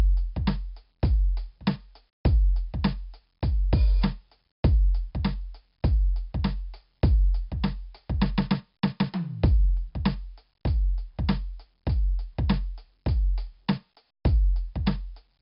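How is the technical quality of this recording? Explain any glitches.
The technical quality is poor. Heavy 4-bit ADPCM compression damages the music for its whole length.

The encoder stores each sample as a coarse 4-bit step from a predicted value, adapting the step size as it goes. Nothing is present above 5.3 kHz, which points to a low sample rate near 11 kHz and fits a stream of about 44 kbps. The music sounds dull and band-limited, with a gritty hiss that rises and falls with loudness and distortion smearing sharp attacks.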